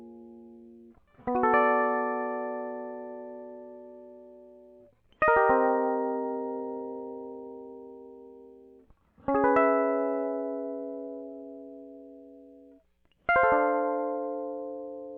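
No technical faults can be heard anywhere in this music. Nothing stands out as a problem at any point in the audio.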